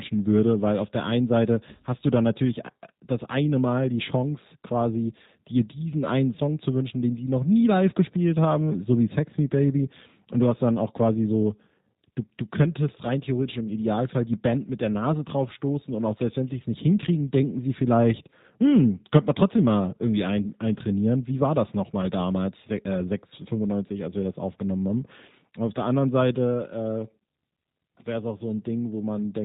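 Throughout the speech, the sound carries plainly audible G.729 codec damage. It fits the 8 kbit/s G.729A coder, which rebuilds the voice from a vocal tract model and sparse pulses. Nothing above 4 kHz survives. The result sounds muffled, rough and slightly synthetic.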